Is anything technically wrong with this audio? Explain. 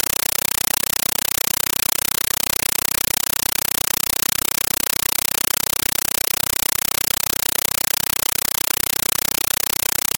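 Yes. A compressed stream is played as audio throughout. An undecoded AC-3 bitstream, which fits a 384 kbps stream, is treated as plain samples. Each frame becomes an 8 ms noise burst, then silence, 31.25 times a second. It sounds like loud, chattering static.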